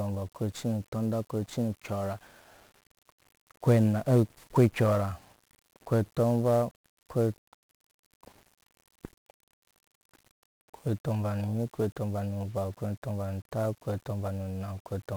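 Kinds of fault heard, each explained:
1-bit DFPWM compression: The speech here is coded with a single bit per sample. Each bit only nudges an adaptive level up or down, so the waveform is traced in coarse steps. That leaves heavy broadband quantisation noise across the whole clip. The speech sounds fuzzy and crackly from start to finish. The upper treble sinks under a constant hiss. The damage is heavy, which fits a stream of roughly 48 kbps.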